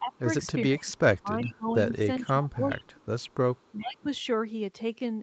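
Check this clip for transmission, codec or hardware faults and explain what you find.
Two kinds of fault turn up here, both typical of a hands-free call where the two ends overlap.

Speech suppressed in double talk shows at 0.00–0.27, 0.65–1.78, 2.19–3.08 and 3.76–4.09 s. The speech ducks by about 20 to 25 dB. Likely the echo canceller couldn't separate the local talker from the returning far-end sound during overlap, so it pulled everything down.

Echo leak appears at 1.46–1.53, 2.71–2.77, 3.20–3.34 and 3.56–3.84 s as faint copies of the speech arriving 400 ms late. They sit about 20 to 40 dB below the main level, likely residue that the far end's canceller failed to remove.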